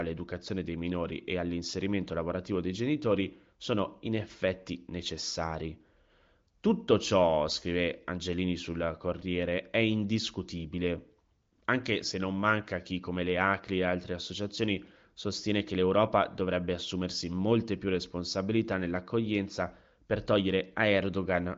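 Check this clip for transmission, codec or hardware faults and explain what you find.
No transmission, codec or hardware faults turn up anywhere in this speech recording. It has been carried over the AMR wideband (HD Voice) codec with at most faint coding traces, which fits the codec's high 23.05 kbit/s mode, and the band stops at about 7.5 kHz, as expected for wideband telephony.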